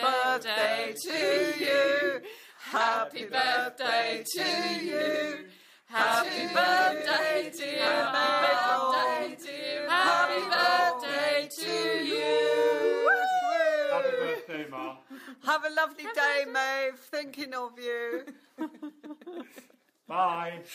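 From about 5.98 s to 11.20 s there's a doubled audio track: a second full-band copy of the sound runs roughly two seconds behind the original, sitting around 5 dB quieter. It's dry, with no decay or room tone, so it reads as a clean overlapping repeat rather than an echo, and it cuts in and out abruptly at both ends. That likely comes from the signal being captured twice through a slower second path.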